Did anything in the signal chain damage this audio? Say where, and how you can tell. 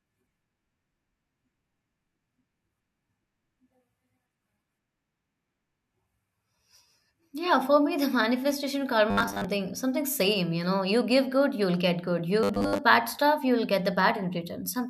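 Yes. Robotic sound from repeated short buffers appears at 9.11 to 9.45 s, just before "something same you know", and again at 12.43 to 12.78 s. Both times the speech becomes a rigid metallic buzz at 100 Hz that still loosely follows the words. It likely comes from the driver or buffer stage: audio arrived too seldom, so a 10 ms block was replayed over most of the real signal. Unlike a dropout, nothing falls silent, and the fixed pitch gives it away.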